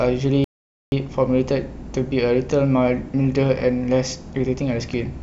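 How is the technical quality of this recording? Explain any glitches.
One glitch affects the recording: a rebuffering stall early in the speech. From 0.44 to 0.92 s the audio drops to silence for about 0.48 s, then picks up exactly where it stopped. The player exhausted its downloaded audio and paused until more arrived, so nothing is skipped, only time added. The waveform shows a flat gap and the spectrogram a blank vertical band, with no missing material on either side.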